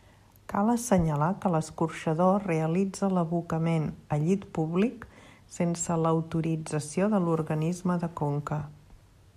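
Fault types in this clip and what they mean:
No technical faults detected.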